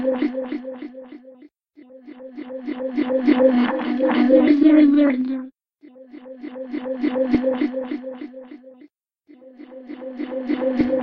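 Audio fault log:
No faults detected.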